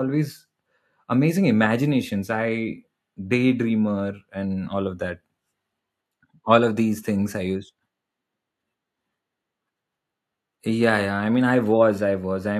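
Speech, with no technical fault to be heard at any point. Nothing in the sound points to a problem in how it was captured, processed or delivered.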